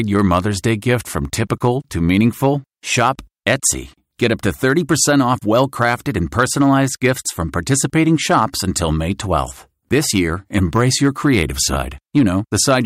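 Hard clipping runs through the whole clip. The speech was driven about 3 dB beyond what the signal path could carry, so the highest peaks are sliced flat at the ceiling. Only a small fraction of samples, around half a percent, reach that limit, so the damage is confined to the loudest moments. Each flattened peak adds high harmonics, heard as brief crackle and edginess on stressed, loud syllables rather than constant fuzz.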